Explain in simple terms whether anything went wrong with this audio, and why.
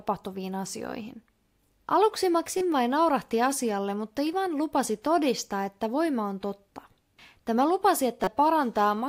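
Two short glitches interrupt this speech recording, at about 2.58 to 2.61 s and again at 8.24 to 8.28 s. Each lasts only a few hundredths of a second. The first comes just before "vain naurahti asialle mutta". The cause is damaged data in a compressed stream. A small piece of the compressed file was corrupted. The player could not read it properly and had to find its place again. That leaves a brief chirp, click or gap in the sound.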